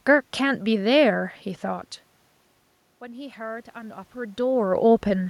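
At 2.99 s the automatic gain rising kicks in and keeps climbing until about 4.48 s. The input had dropped by about 19 dB, so the gain control decided things were too quiet and pushed its gain up by about 5 dB, gradually, over that second and a half. You hear the speech swell back up, and the room noise underneath lifts right along with it. The nearby level shifts around one and a half and four seconds are just the talker moving.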